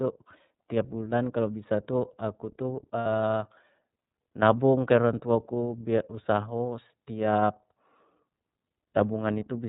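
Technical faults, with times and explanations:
Throughout: iLBC codec. The speech is cut off above 4 kHz, so sibilants lose their edge and the sound turns thin and narrowband. On top of that it has a plainly audible rough, slightly synthetic grain, because the codec rebuilds each frame's excitation on its own rather than smoothing it from the frame before. The texture points to iLBC's 30 ms mode at about 13.3 kbps. This differs from a plain low-pass filter, which would leave the remaining band clean instead of grainy.
3.00–3.06 s: lost iLBC frames. For 60 ms the sound becomes a held, faintly buzzy vowel-like tone. The decoder fills the gap by repeating the last pitch cycle mixed with noise, and the length fits two lost 30 ms frames. Clean speech returns almost immediately after the gap, because iLBC frames do not depend on earlier ones. That quick recovery separates it from codecs whose errors linger into following frames. 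It also differs from a dropout, which would leave silence where this leaves a sustained tone.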